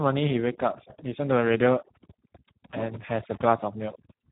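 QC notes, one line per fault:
throughout: overdone noise removal. The background between phrases drops away, leaving twinkling, bubbling specks where isolated frequency bands briefly slip past the suppressor. Because the reduction is set far too strong, any band sitting close to the noise estimate is pulled down or switched off, and the quieter parts of the speech are removed with the noise. The twinkle in the gaps sets it apart from codec damage, which roughens the voice itself.
throughout: Speex codec, heavy damage. The speech sounds hoarse and edging toward robotic, and nothing remains above 3.8 kHz, a narrowband result. The harshness fits a low setting of around 8 kbps, where this CELP coder has too few bits to model the excitation and falls back on a coarse, noise-like source. Unlike the noise-removal artefacts, this grit stays locked to the voice and follows every syllable instead of sparkling in the pauses.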